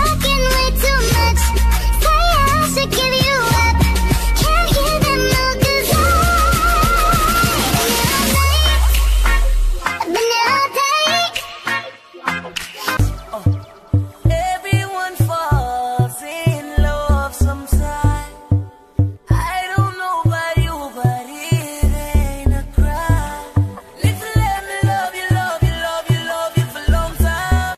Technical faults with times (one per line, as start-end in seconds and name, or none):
none